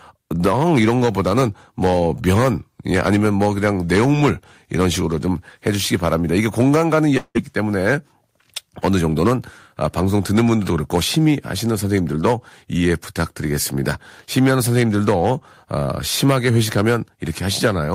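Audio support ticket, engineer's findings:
Long network dropout, 7.17–7.37 s: stream likely interrupted, 180 ms of speech lost. Concealment stretches the last sound into a fading buzz, then 50 ms of silence before speech resumes.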